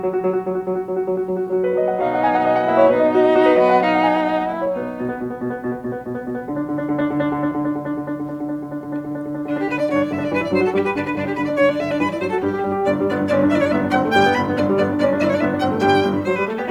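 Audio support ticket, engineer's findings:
Music signal reviewed in full; no audible faults found on the capture or playback path.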